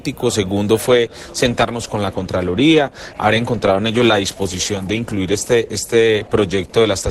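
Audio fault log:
0.82 s to the end: adaptive stream at a lower bitrate. Quality changes suddenly, with no gap. Codec artefacts rise, and nothing remains above 12.1 kHz. A slowed connection forced a switch, which fits Opus dropping from 64 to 12 kbit/s.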